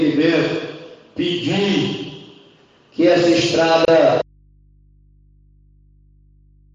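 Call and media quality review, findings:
Gap at a join of encoded pieces, 3.85 to 3.88 s: a 29 ms hole in continuous sound, smeared edges, then picks up where it left off. Separately encoded chunks got stitched without trimming encoder delay and end-frame padding.

Audio dropout to a faint residue, 4.22 s to the end: sound cuts out abruptly and only mains hum remains, roughly 35 dB below the signal. Likely the source was lost upstream while the downstream input stayed live and open.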